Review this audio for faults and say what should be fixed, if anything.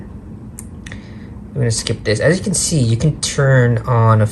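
Nothing in this audio needs fixing. No fault can be heard at any point, so no correction or prevention step is called for.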